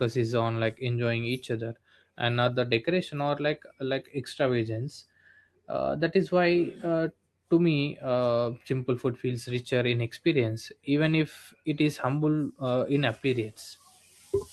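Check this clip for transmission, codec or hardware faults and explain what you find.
Nothing stood out on listening to this speech recording.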